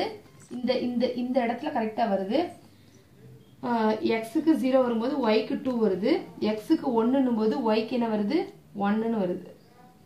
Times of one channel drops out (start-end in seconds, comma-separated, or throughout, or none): 0.47-0.63